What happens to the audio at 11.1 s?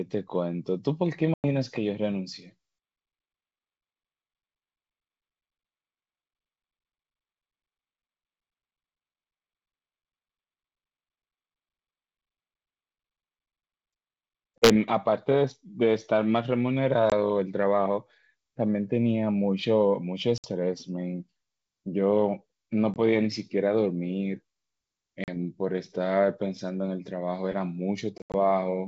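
Nothing goes wrong at 11.1 s; the speech passes through intact, carried by G.722 wideband telephone coding at 64 kbit/s with at most a faint trace of the codec.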